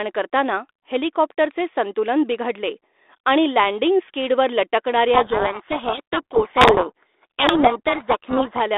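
A codec payload misread runs from 5.14 to 8.61 s: the two ends disagree on the bit order of the G.726 code words. The decoder rebuilds wrong sample differences, burying the speech in harsh, grinding distortion. This sits over an already narrow 300 Hz to 3.6 kHz telephone band.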